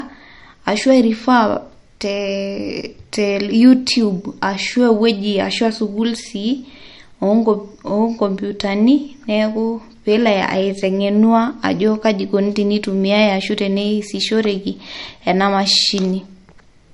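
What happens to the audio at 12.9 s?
At 12.9 s, as throughout the clip, the speech has nothing above about 11.1 kHz and carries the smeared, swirly coding artefacts of heavy compression. This is likely low-bitrate audio saved at a high bitrate: damage from a low-bitrate MP3 pass that a later high-bitrate MP3 encode cannot repair. Unlike a clean low-pass filter, the missing top end comes with compression artefacts.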